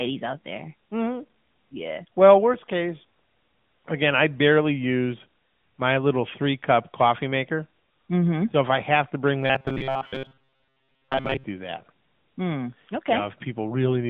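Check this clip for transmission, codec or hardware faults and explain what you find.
Two faults are audible in this speech clip: a narrowband mobile codec across the whole recording, and a robotic buzz near the end.

AMR narrowband mobile codec, throughout: the codec rebuilds speech from a vocal-tract model excited by a handful of pulses per subframe, so the top end simply stops near 3.5 kHz and the line band sits between about 150 Hz and 3.5 kHz. Damage is plainly audible, a buzzy, synthetic edge that fits a mid-rate mode around 10.2 kbps. Unlike a plain low-pass filter, the texture itself sounds artificial, not just dull.

Robotic sound from repeated short buffers, 9.41 to 11.45 s: here the speech hardens into a rigid metallic drone pitched at 133 Hz, while still roughly tracking the syllables. The likely cause is audio arriving too late, with playback looping the latest fragment, around 7.5 ms, which fits that fixed pitch. 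Most of this stretch is repeats, not new audio. Unlike the codec's buzz, this one has a fixed pitch that holds steady instead of following the voice.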